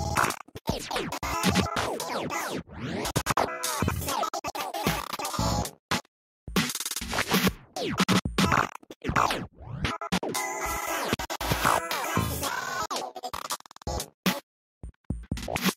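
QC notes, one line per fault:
No faults heard anywhere in the recording.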